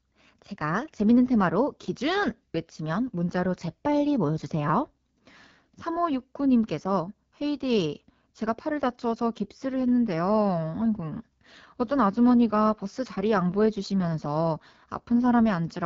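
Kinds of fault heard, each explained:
AMR wideband (HD Voice) codec: The speech has been through AMR-WB at one of its lowest modes, and the damage is plainly audible throughout: voiced sounds come out rough and raspy, as the pulse-excited vocal tract model runs short of bits. Nothing is present above 7.3 kHz, and the top band sounds like shaped noise rather than real detail. The degree of roughness fits the 8.85 kbit/s mode.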